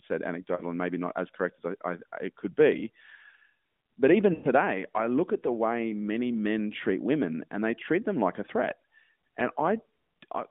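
Lost AMR speech frames at 0.56 to 0.62 s and 4.34 to 4.47 s: concealment repeats the last good frame with falling gain, giving a brief dip, then a longer drawn-out fade.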